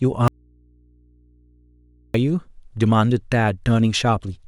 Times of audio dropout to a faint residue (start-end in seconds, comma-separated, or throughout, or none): 0.28-2.14